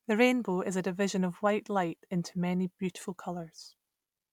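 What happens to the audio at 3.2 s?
Nothing goes wrong at 3.2 s: the speech carries on intact through that moment, with no dropout, click or distortion.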